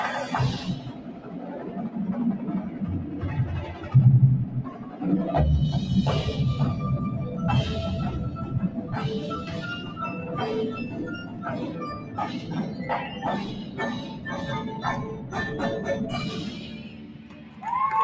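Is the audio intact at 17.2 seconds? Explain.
No. A speech-tuned noise suppressor was left running on this material and treats its steady tones, ambience and tails as noise, so held sound pumps and thins, with a level swing of around 10 dB. Around 17.2 s it goes further: the suppressor took the sound from 16.52 to 17.62 s for noise and pulled it down by up to about 5 dB. Sustained parts sag and decays are cut short, while sharper onsets mostly survive.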